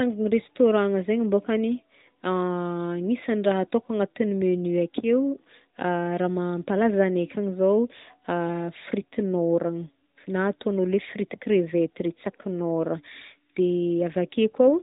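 No technical faults can be heard in this speech.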